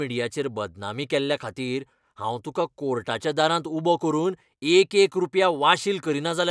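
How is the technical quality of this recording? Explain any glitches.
Nothing in this recording glitches or breaks up, so there's nothing to explain here.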